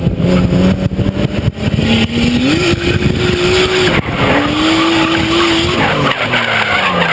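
Throughout the clip there is gain pumping: the level swings by around 10 dB, likely from an oversensitive input being clamped by a fast limiter, so the waveform envelope looks flattened. The call's microphone processing leaves nothing above 8 kHz on the spectrogram.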